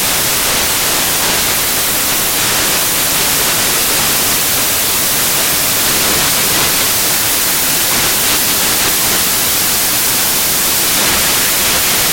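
From start to finish the audio is buried under loud, hissing noise that is close to white on loud sounds. These are samples built from the wrong bytes: the reader misassembles each sample's bytes, so fast-changing low bits dominate every value.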